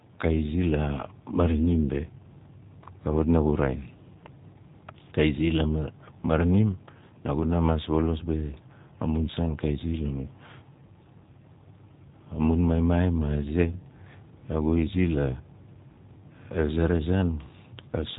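Speech, carried through the G.729 codec throughout. Nothing passes above 3.8 kHz. The plainly rough, synthetic texture fits speech rebuilt at 8 kbit/s from a vocal tract filter and sparse pulses.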